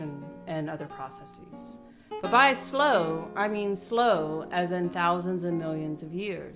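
No technical faults can be heard in this music clip. Nothing in the audio calls for a fault description here.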